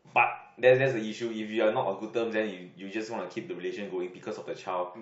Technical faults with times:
0.62 compressed frames skipped

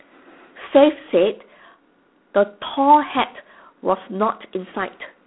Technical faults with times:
0.00-5.26 G.726 ADPCM

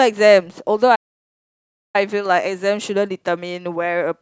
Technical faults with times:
0.95-1.96 playback stall

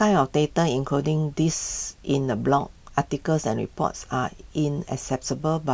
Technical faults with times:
none

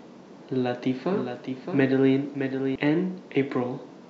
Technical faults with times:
0.92-2.75 doubled audio track

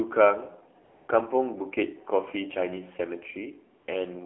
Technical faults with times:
0.00-4.26 AMR narrowband mobile codec
0.84-1.08 AMR comfort noise
3.80-3.88 AMR comfort noise

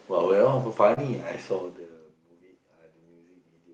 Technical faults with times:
0.93-0.98 short concealed packet loss

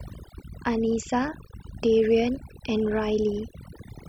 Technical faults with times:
0.00-4.09 overdone noise removal

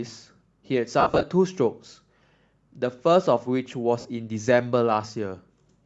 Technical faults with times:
0.00-5.85 Bluetooth LC3 compression
1.00-1.23 lost LE Audio frames
4.00-4.05 lost LE Audio frames

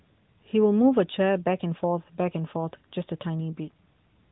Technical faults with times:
none

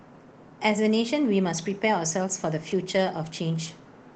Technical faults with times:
none

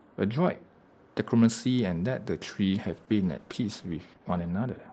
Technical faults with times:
2.76-4.93 call bitrate drop

